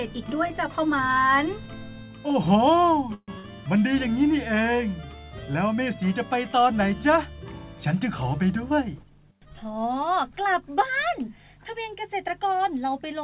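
A call path is audible throughout: the audio is band-limited to 4 kHz, which fits narrowband telephone coding such as 64 kbps G.711 A-law. From 3.14 to 3.30 s there is a call audio freeze, most likely because delayed packets let the jitter buffer run empty. The receiver stretched the last sound into a fading fill for 137 ms, the final 30 ms of it silent, then resumed where it stopped, so nothing is lost but the delay grows by 137 ms. Just after, from 3.38 to 3.45 s, a burst of packet loss drops about 60 ms of audio; a 57 ms concealment fades out before playback jumps ahead past the missing stretch. From 8.55 to 9.12 s a jitter buffer speed-up trims repeated pitch-period slices, around 50 ms in all, so the audio runs at 109% speed with unchanged pitch and sounds briefly hurried.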